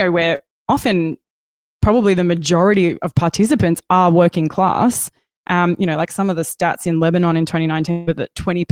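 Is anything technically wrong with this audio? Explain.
Yes, this speech recording has two network-related faults.

Short concealed packet loss occurs at 0.35 to 0.41 s, very near the start. About 40 ms of audio failed to reach the decoder in time, and the receiver covered roughly 37 ms of that hole by extending the preceding sound from its last pitch or noise shape, then crossfading back into the real signal. The result is a brief smear or wobble where the sound is momentarily stretched rather than cleanly continued.

Long network dropout is the likely cause of the disturbance at 7.91 to 8.09 s, near the end. Audibly, about 160 ms of genuine audio is missing, and for about 157 ms of that span the sound is carried forward as a synthetic buzz or hiss. The gap never falls into silence. When real audio resumes, the part that went missing is simply skipped, leaving an unnatural jump in the speech.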